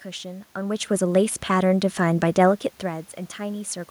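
From 0.53 s to 3.77 s, automatic gain rising: the gain control judged the input too quiet and lifted it by about 5 dB, so speech and room noise swell together. The waveform envelope widens steadily, and the spectrogram brightens evenly, noise floor included.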